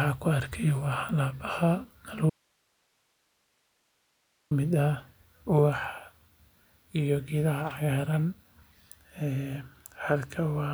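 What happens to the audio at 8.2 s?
Nothing goes wrong at 8.2 s; the speech runs on intact through that moment, with no dropout, click, glitch or other fault.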